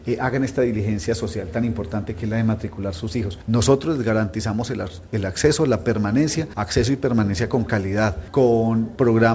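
No technical faults are audible.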